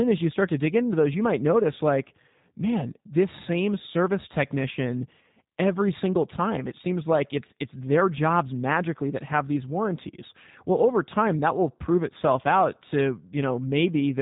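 Throughout, the G.729 codec damage is plainly audible: nothing above 3.8 kHz survives, and the speech rebuilt from coarse pulses sounds rough and synthetic, consistent with 8 kbit/s coding.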